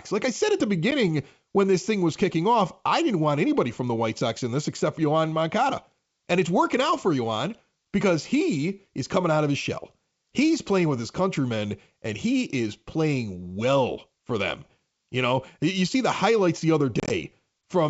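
Packet loss on the ADPCM call drops a single packet at 0.91 to 0.93 s, then several more across 17.00 to 17.11 s (about 70 ms lost, longest gap 30 ms). Silence fills each hole, and the decoder's predictor loses step, so the wideband G.722 speech resumes with brief distortion.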